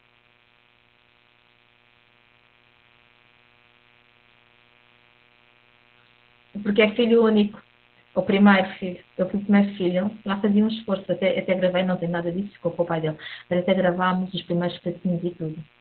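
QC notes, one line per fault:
throughout mains buzz: a steady, raspy buzz sits under the speech at roughly 35 dB below it. Switching spikes leaking in twice per 60 Hz cycle pile up harmonics of 60 Hz reaching into the kilohertz range, giving an edged rather than smooth hum.
throughout Opus voice compression: the speech is muffled, hoarse and slightly robotic, with nothing above about 4.3 kHz. Opus's SILK speech coder at narrowband quantises the excitation coarsely and discards upper frequencies, which fits heavy compression at a bitrate around 8 kbps.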